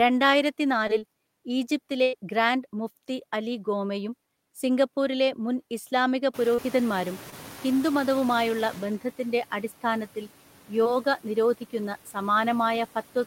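Noise suppressor artifacts run through the whole clip. The suppressor pulls down each frequency band it judges to be steady noise, by about 11 dB, deciding afresh on every frame. As a result the background dips in the pauses and climbs back underneath the speech.

Short concealed packet loss first occurs at 0.87 to 0.91 s and again at 6.55 to 6.60 s, 7.30 to 7.34 s and 10.84 to 10.87 s. Each time roughly 20 ms of audio, or about 40 ms at 6.55 s, failed to reach the decoder in time. The receiver bridged the gap by extending the preceding sound and then cross-fading back into the real signal. Each event sounds like a momentary smear or wobble, and a brief consonant may drop out.

A burst of packet loss at 2.03 to 2.15 s removes about 100 ms. The gap is far too long to conceal cleanly, so the receiver keeps the last sound going while fading it down. The result is a held buzz if the sound was voiced, or a dying hiss if it wasn't. 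The audio then picks up later in the stream, with the section in between missing entirely.

Noise suppressor catching up begins at 6.33 s and lasts to 8.89 s, about 2.6 s in all. Room noise jumps by about 22 dB near 6.5 s and then sits about 20 dB below the speech. The suppressor's noise estimate lags behind that rise, so the noise first breaks through only lightly reduced. It then gradually sinks as the estimate adapts, settling at a cut of about 8 dB.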